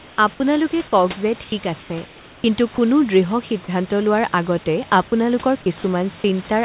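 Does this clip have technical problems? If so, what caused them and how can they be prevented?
Yes. Two related faults are audible.

Comfort noise in place of the background appears at 0.00–0.18 s (just before "আপোনালোকে কওক"), 1.44–1.52 s, 1.80–1.90 s and 2.06–2.44 s. In these pauses the room background, which sits roughly 23–27 dB below the loudest speech, becomes a flat, featureless hiss that is about 1 to 7 dB quieter. The likely cause is discontinuous transmission: the sender stops sending during pauses and the receiver fills the gap with synthetic noise. Turning off discontinuous transmission on the sending side keeps the real background in the pauses.

Sound dropped by the voice detector occurs at 2.74–2.78 s and 5.08–5.12 s. Each time, 40 ms of audio is replaced by steady noise, and about 20 ms of actual speech is lost. The likely cause is that the sender's voice detector read part of the speech as background and paused transmission until it triggered again. 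Disabling the voice detector, or giving it a longer hangover and a lower threshold, keeps quiet speech from being cut.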